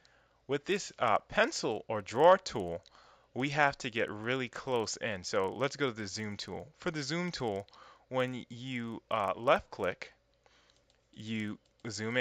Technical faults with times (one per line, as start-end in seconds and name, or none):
0.00-12.20 resampler restarted on every block